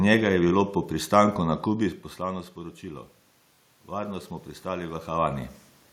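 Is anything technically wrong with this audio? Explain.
Yes, there are two kinds of technical fault in this speech clip.

Bluetooth stutter occurs twice, at 0.49 to 0.52 s and again at 3.55 to 3.59 s. Each time, audio data failed to arrive over the wireless link in time, and the receiver filled the gap by replaying its most recent buffer. About 23 ms went missing in each case, which fits a single lost packet. You hear a brief repeated slice, a tiny buzz-like stutter, after which the speech carries on as though it had kept playing underneath.

Automatic gain rising runs from 3.91 to 5.55 s. The level reaching the microphone dropped by about 13 dB, and the gain control responded by slowly turning its gain up, by about 3 dB across that span. The correction is gradual and only partial. The voice and the background room noise swell together over more than a second, rather than the voice alone getting louder.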